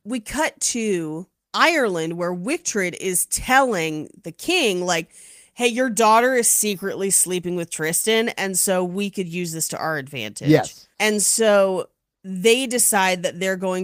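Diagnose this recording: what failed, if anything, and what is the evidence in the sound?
Nothing in the chain has failed: the speech signal shows no audible defect at any stage from capture through to playback.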